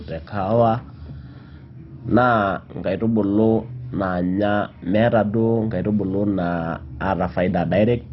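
MP2 compression, heavy, runs through the whole clip. Nothing reaches above about 5.6 kHz, so the speech sounds dull and boxed-in, and a gurgling, granular roughness sits on the speech. This is likely an MPEG Layer II encode starved of bits, consistent with a very low bitrate. The encoder has shut off the upper sub-bands entirely and quantised the remaining bands so coarsely that they flutter and grind instead of carrying clean detail.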